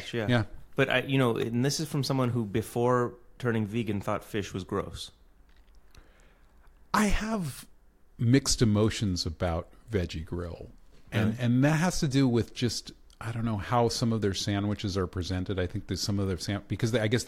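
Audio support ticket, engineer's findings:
Electrical switching spike at 1.42 s, between "I you know" and "this is from someone". Sharp snap, around -25 dBFS peak, added over the speech, intact beneath, unlike a dropout. Likely nearby switch arc coupling into line.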